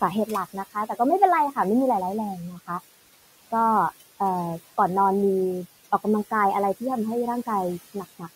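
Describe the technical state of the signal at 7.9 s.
At 7.9 s you're hearing overdone noise removal, present across the whole clip: the bands near the noise estimate get pulled right down, so the background drops and breaks up into little twinkling specks. On top of that there are noise suppressor artifacts, also running throughout. The suppressor cuts the noise by about 16 dB between phrases and lets it rise back under the speech. The room noise, sitting about 19 dB below the speech, is just part of the recording.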